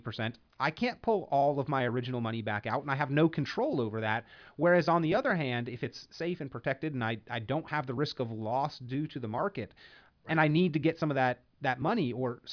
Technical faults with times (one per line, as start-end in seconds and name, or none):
none